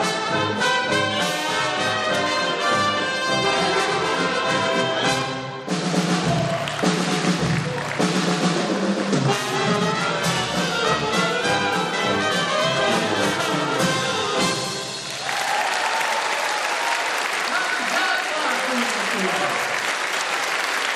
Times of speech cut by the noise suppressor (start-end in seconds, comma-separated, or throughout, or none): none